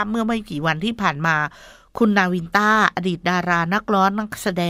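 Speech recording in which no technical fault can be heard at any point in the signal.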